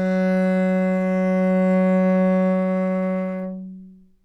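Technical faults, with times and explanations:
No technical faults found in this audio.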